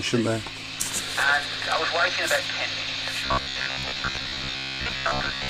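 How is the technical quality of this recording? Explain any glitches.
The recording has one glitch, at the end. From 3.26 to 5.49 s the sound becomes a rigid, metallic 66.8 Hz buzz: robotic sound from repeated short buffers, likely a roughly 15 ms slice replayed for most of that stretch while the real audio is skipped.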